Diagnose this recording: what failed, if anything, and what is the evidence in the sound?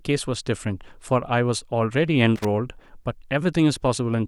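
The failure is in the analogue wiring: a loose connector crackle runs from about 2.36 s to 2.45 s, a burst of roughly 90 ms of irregular scratching laid over the speech. A worn or dirty contact in the signal path is making and breaking intermittently as it shifts, so the audio is chopped in rapid, uneven fragments, and any DC present on the line is switched on and off with it, adding pops within the burst.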